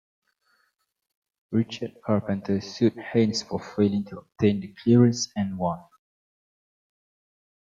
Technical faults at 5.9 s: none

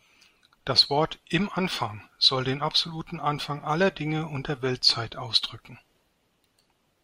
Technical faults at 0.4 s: clock slip clicks

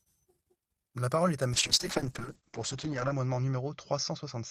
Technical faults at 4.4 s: call bitrate drop

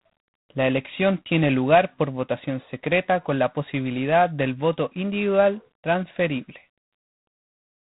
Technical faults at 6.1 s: G.726 ADPCM

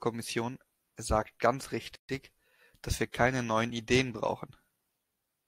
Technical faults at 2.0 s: gap at a join of encoded pieces

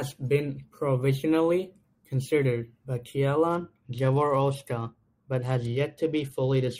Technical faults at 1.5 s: none

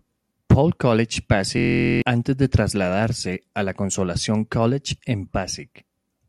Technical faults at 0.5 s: none

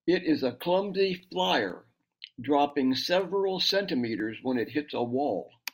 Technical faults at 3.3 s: periodic USB or driver dropouts

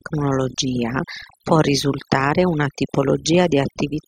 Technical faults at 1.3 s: overdone noise removal

